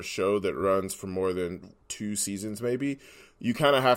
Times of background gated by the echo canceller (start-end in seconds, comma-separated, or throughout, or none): none